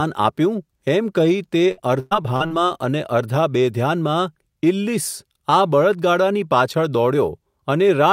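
From 1.71 to 2.52 s the speech breaks up through repeated packet loss (robotic sound). Five gaps fall in under a second, the longest about 112 ms. Each hole is bridged by stretching the last received audio, so about a third of the span is synthetic fill, and the result sounds choppy, with pieces missing. On a spectrogram the harmonics freeze into flat, smeared bands between abrupt cuts, and the waveform shows repeated, uniform cycles where natural variation should be.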